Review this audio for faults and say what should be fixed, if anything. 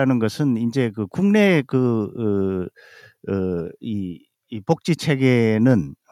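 Nothing here needs fixing.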